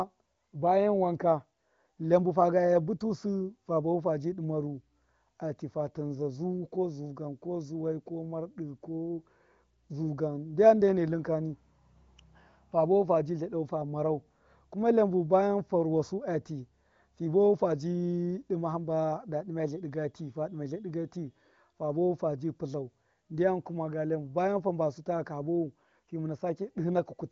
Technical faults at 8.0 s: none

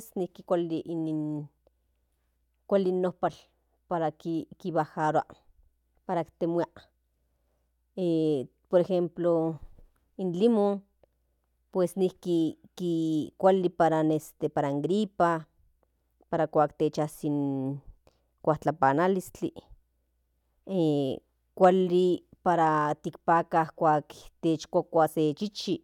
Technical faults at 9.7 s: none

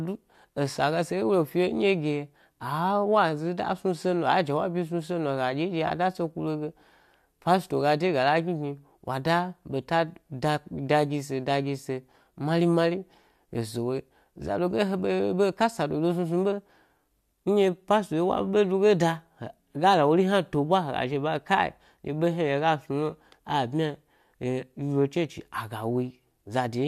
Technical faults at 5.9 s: AAC frame loss with concealment

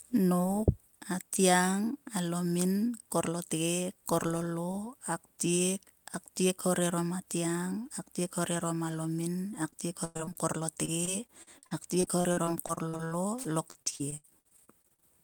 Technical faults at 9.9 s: repeated packet loss (robotic sound)

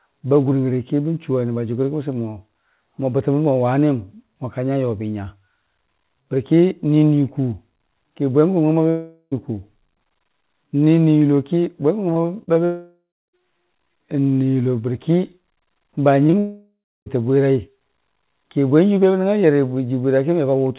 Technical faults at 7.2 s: none

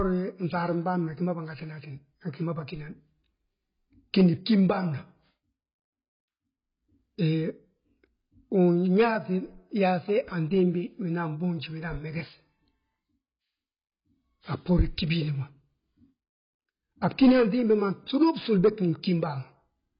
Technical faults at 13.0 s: AAC compression

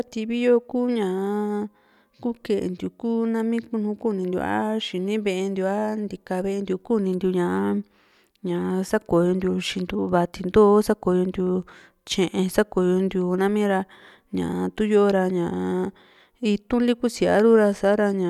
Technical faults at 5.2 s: none

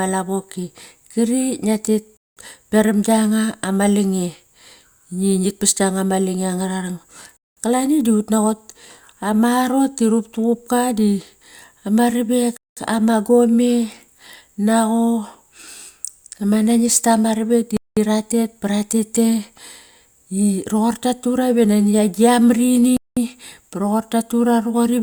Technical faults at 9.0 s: none

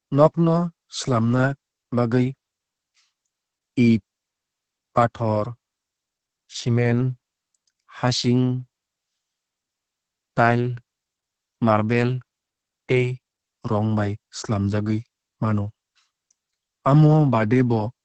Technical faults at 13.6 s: Opus voice compression

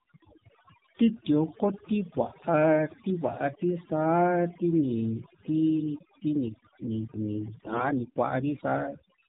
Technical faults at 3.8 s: overdone noise removal; AMR narrowband mobile codec

